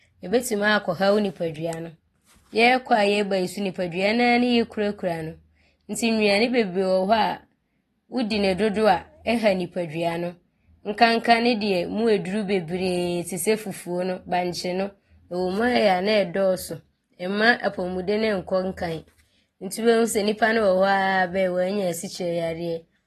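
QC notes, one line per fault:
throughout, AAC compression: plainly audible dull, smeared sound with nothing above 12.5 kHz, likely low-bitrate AAC-LC around 32 kbps; the damage is steady, not tied to attacks.
9.25 s, pre-echo: a brief hiss of about 14 ms comes before a sharp onset, as block-spread quantisation noise leaks ahead; unlike steady codec smear, it precedes the attack.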